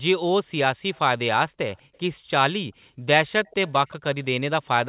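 Faint delayed copies of the speech, about 180 ms late, surface at 0.94–0.99 s, 1.75–1.81 s and more audibly at 3.45–3.96 s, likely an echo leak.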